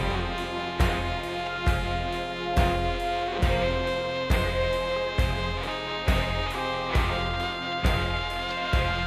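No technical faults can be heard in this music.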